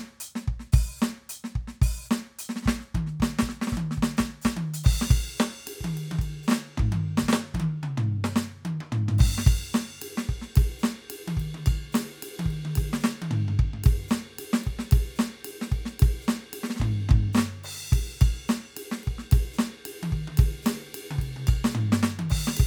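Nothing in this music recording stood out as a technical fault on listening.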